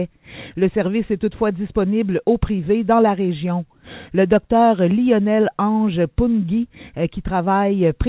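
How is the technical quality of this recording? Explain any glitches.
No glitches can be heard; the recording has the narrowband sound of a phone-call path, consistent with G.711 mu-law coding at 64 kbps, with nothing above 4 kHz, and that band limit, along with the codec's usual coding noise, is what marks the signal.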